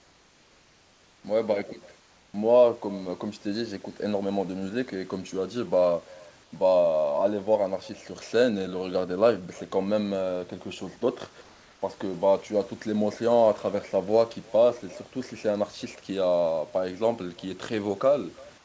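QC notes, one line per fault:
Throughout: echo with no canceller. Every stretch of speech is followed roughly a third of a second later by a faint copy, about 27 dB below the direct speech, thinner than the original. The far end played the call over a loudspeaker, its microphone picked that playback up, and nothing subtracted it before it was sent back. The copy arrives after one network round trip, so it trails the talker as a quiet shadow.
0.00 to 1.24 s, 2.00 to 2.34 s, 6.44 to 6.52 s, 11.42 to 11.82 s: comfort noise in place of the background. In these pauses the room's natural background, normally about 34 dB under the speech, gives way to a smooth, featureless hiss about 2 to 3 dB quieter. The likely cause is discontinuous transmission: the sender went silent when its voice detector heard no speech, and the receiver filled the gap with synthetic noise shaped only roughly like the real background.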